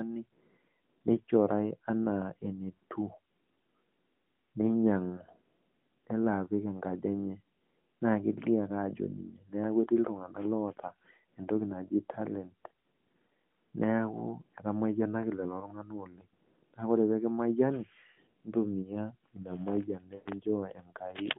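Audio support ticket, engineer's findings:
Lost AMR speech frames, 20.16–20.32 s: sound is drawn out, fades toward silence, returns weak. Decoder reusing last good pitch and vocal tract settings at falling gain over about 100 ms, fitting five 20 ms frames. Waveform shows a decaying envelope. Spectrogram shows frozen harmonics fading out, capped near 3.5 kHz by the AMR-NB line band.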